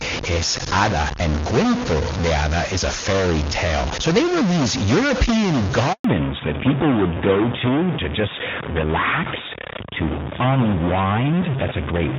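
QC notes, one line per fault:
Throughout: stuck bit. A distortion rides on the speech, and the pauses are filled with hiss instead of falling silent. That points to one data bit held at a fixed value, likely from a broken line or converter. It pushes roughly half the samples off by that bit's weight, and around silence it flips with the sign of small values.
5.92–6.04 s: handover gap. The call switched networks, and no speech frames arrived for 120 ms. The voice dies away within a few tens of milliseconds and stays silent until the new link picks up, so whatever was said in that window is lost.
6.04 s onward: fallback to narrowband. After the handover the call dropped from AMR-WB at 23.85 kbit/s to AMR-NB at 12.2 kbit/s. Nothing above 4 kHz survives from here on, so the speech turns duller and rougher than it was before.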